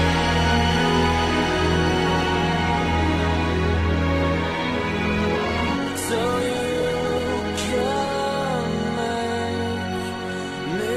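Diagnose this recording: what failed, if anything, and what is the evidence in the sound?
Call bitrate drop, at the codec stage driven by the call's bandwidth estimate. From 5.07 s to 8.21 s the audio turns coarse and muffled, with the top end cut away. This fits the encoder being pushed from around 48 kbps down to roughly 12 kbps before recovering.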